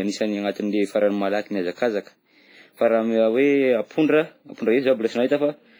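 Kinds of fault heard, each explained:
WMA compression: The speech carries heavy transform-codec damage throughout, and the likely cause is Windows Media Audio encoding. The codec works in long blocks, so its quantisation noise smears across tens of milliseconds around each sound. Here that gives a ringing, washy edge to the speech. A hiss swells and fades with the signal. Weaker detail is stripped out. The depth of damage fits a low bitrate of about 24 kbps.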